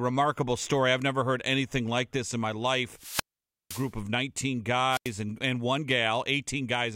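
Twice the radio link from the wireless microphone weakens until the receiver's squelch shuts the output off, a wireless microphone squelch dropout. From 2.93 to 3.94 s the fading carrier lets hiss rise before the mute cuts the voice for about 0.51 s, leaving a hole of near silence until the signal recovers. A shorter episode follows from 4.90 to 5.11 s, with a mute of about 88 ms.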